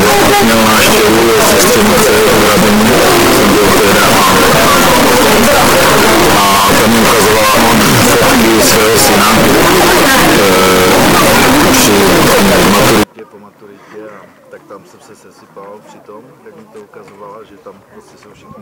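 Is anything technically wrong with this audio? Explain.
Yes. From 0.0 to 13.03 s the audio is a loud, harsh distortion in which soft sounds are as loud as strong ones. This is likely signed and unsigned mixed up in the 8-bit samples, flipping the top bit so every zero crossing jumps full range.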